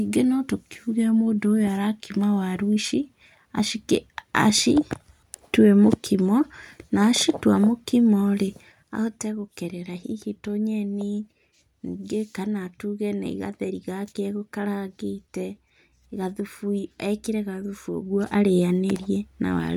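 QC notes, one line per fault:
17.95–18.38 s, zipper noise: the speech level changes by about 10 dB in 2 dB jumps, around fifteen a second, with no smoothing between them. Each jump is a small discontinuity, so a quick ticking rides on the speech. The waveform envelope shows a staircase of abrupt amplitude steps, and the spectrogram shows a row of faint broadband vertical lines at each step.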